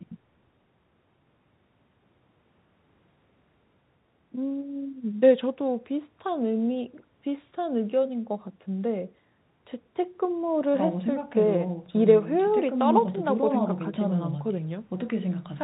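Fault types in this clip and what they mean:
Nothing to flag here; the speech just comes down an ordinary phone line, with the usual narrow telephone band.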